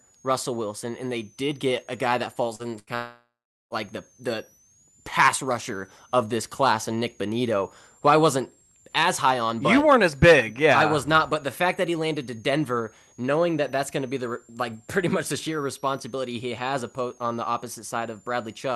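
A switching supply whistle runs through the whole recording. It is a thin, high tone sitting between about 5.7 and 7.8 kHz, mostly near 7 kHz. It is faint, roughly 35 dB below the speech. It comes from a switching power supply running in an audible burst mode or beating with another one. Its pitch wanders within that band rather than holding still. It stays audible through the call codec's band, which reaches about 12 kHz.

At 2.55 s, just after "get a guy that", there is a short concealed packet loss lasting until 2.62 s. About 40 ms of audio never arrived in time. The receiver extended the last sound to cover the hole and then blended back into the real signal. It is heard as a brief smear or wobble.

From 2.79 to 2.90 s comes a burst of packet loss. About 80 ms went missing in a row. The receiver stretched the last sound across the gap and let it fade as the gap went on. Voiced sound turns into a short held buzz, and other sounds into a dying hiss. 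Speech then picks up further on, with that stretch gone.

At 2.95 s a long network dropout begins, lasting until 3.74 s. It is likely caused by the network delivering nothing for nearly 0.8 s. The receiver first continues the last sound as a fading buzz or hiss. After that comes about 0.39 s of silence. Speech returns at "the the pass rusher", with the lost part skipped.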